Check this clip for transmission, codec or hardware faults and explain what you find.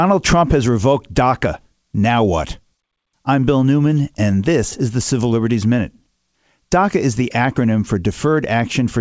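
Nothing here points to a transmission, codec or hardware problem: the speech comes through steadily over what sounds like a normal wideband call path, with nothing above 8 kHz, consistent with G.722.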